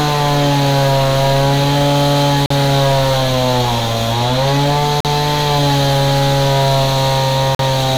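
Throughout the recording, hard clipping flattens the peaks. The signal is driven about 9 dB beyond what the chain can pass, so around a tenth of the samples are cut off square, and the extra high harmonics give every loud sound a harsh, fuzzy edge.

At 2.46 s, 5.00 s and 7.55 s, a gap between chunks cuts the sound off for 44 ms each time, at the joins of 2.5-second blocks. The content is intact, but silence is inserted at each boundary, heard as short holes recurring at a steady rhythm.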